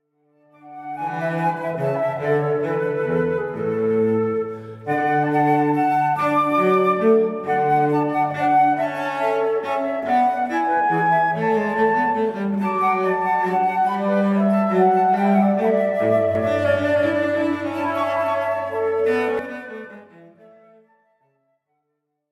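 From 16.35 s to 19.39 s the audio becomes a doubled audio track: a second full-band copy sits roughly a third of a second behind the original at a level a few decibels lower, giving a flat, stuttering echo with no decay or room colour. It likely comes from the signal being captured again through a slower path. On a waveform and spectrogram every onset repeats as a sharp-edged duplicate, and the copy appears and vanishes abruptly at both ends.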